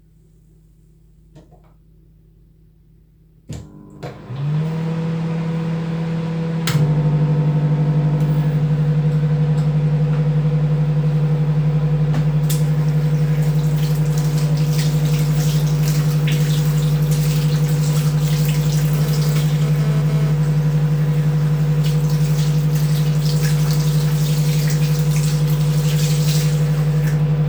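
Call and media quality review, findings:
GSM phone buzz, 18.95–20.32 s. Nearby 2G handset in a data transfer, bursting at 217 Hz; audio input stage rectifying the RF pulses. Result: hard, raspy 217 Hz buzz with dense harmonics, about 17 dB below the audio, appearing briefly, then gone.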